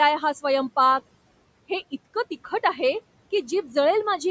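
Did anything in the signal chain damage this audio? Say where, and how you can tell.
Yes. The damage happens in the call processing stage, at the noise suppressor. Between 3.47 and 3.76 s, this is speech cut by the noise suppressor. Parts of the speech dip by up to about 7 dB, around a tenth of a second in total. Those sounds come out swallowed and faint. The suppressor judged them too close to the room noise, which sits about 21 dB below the speech, and turned them down with it. The call band, with nothing above 8 kHz, is the expected microphone processing.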